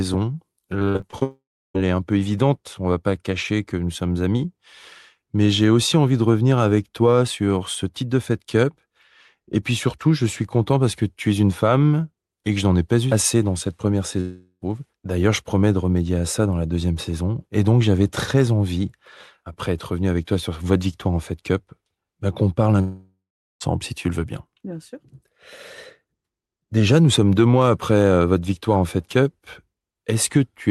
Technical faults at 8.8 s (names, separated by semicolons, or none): none